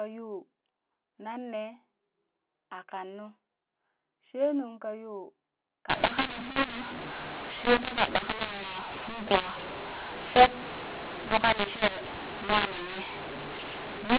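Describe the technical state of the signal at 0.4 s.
At 0.4 s the speech is intact, carried cleanly through the G.711 telephone coding with its usual 4 kHz ceiling.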